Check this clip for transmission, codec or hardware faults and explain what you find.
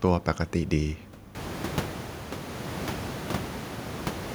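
One fault is present. From 1.84 s to the end, a stutter with silent gaps: a 0.13 s burst of speech returns four times with 0.41 s of silence between, likely from a stalled stream replaying its last fragment.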